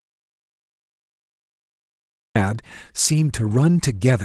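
From the very start of the clip to 2.36 s there is an audio dropout to silence: the recording opens in digital silence, with no room tone or background at all, and the speech only begins once the signal returns at 2.36 s. Complete silence like this most likely means the input was lost while the recorder kept writing silence. Anything spoken before that point is absent, and the returning speech carries the slight coding character of 20 kbps Opus voice compression.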